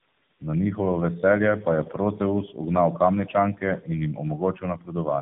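Throughout the clip there is tandem speech coding: the speech has passed through two low-rate codecs in a row, each re-coding the previous one's already degraded output. That fits two AMR narrowband stages joined by a G.711 link. It sounds rough, muffled and warbly. A spectrogram shows nothing above 3.6 kHz and smeared, blotchy formant bands.

From 4.38 to 4.95 s, the noise suppressor cut speech, treating parts of it as noise. Roughly 300 ms of that span is pulled down, by about 12 dB at the deepest point, so sounds there come across as swallowed and faint. On the waveform, the envelope dips sharply and the spectrogram thins out, down toward the room noise, which sits about 27 dB below the speech.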